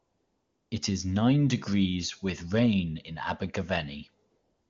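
From the start to 0.71 s, the background is AMR comfort noise. The phone judged the talker silent and sent no speech frames. The receiver filled that gap with synthetic hiss built from a rough level and spectrum estimate. It sounds steady and smooth, unlike the real room. The same thing returns from 4.29 s to the end, about 0.4 s. At each boundary the noise switches in or out. The wideband speech between is clean, consistent with a high AMR-WB rate.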